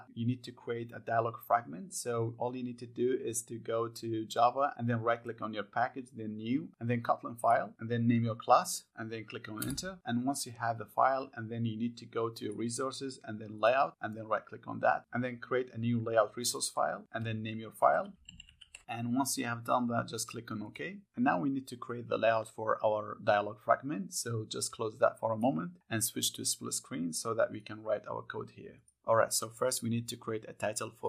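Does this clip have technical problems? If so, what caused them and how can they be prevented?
No technical faults are audible.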